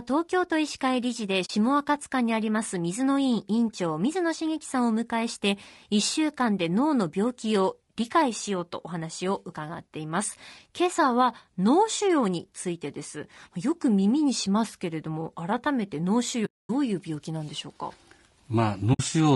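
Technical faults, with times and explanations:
throughout: low-delay AAC compression. The speech is rough and grainy, with noise between the harmonics and a thin top band, likely AAC-ELD at around 32 kbps.
1.45–1.50 s, 16.45–16.70 s, 18.93–19.00 s: AAC frame loss with muting. The sound fades into soft-edged silences of about 40, 240 and 60 ms, where lost frames were zeroed.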